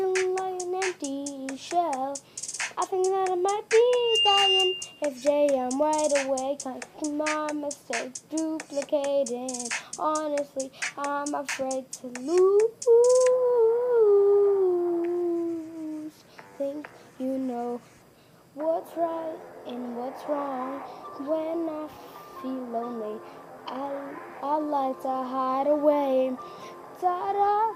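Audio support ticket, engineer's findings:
Loudspeaker feedback squeal, 3.88 to 5.10 s. A single 2.8 kHz tone swells up over about a third of a second and sits about 5 dB above the programme sound until it cuts off at 5.10 s. The probable components are the mic and the loudspeaker it feeds. The acoustic loop gain passes unity at 2.8 kHz, so that frequency recirculates and grows on its own until the loop is broken.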